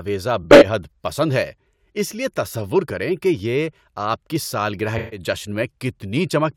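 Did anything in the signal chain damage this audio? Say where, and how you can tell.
Yes, at the codec stage. The speech has two runs of corrupt frames concealed, one from 0.43 to 0.65 s and another from 4.98 to 5.20 s, just after "کی سالگرہ". Each spans about a fifth of a second, and the timing carries on unbroken. That fits the AAC decoder catching damaged bits over a run of frames and masking them itself.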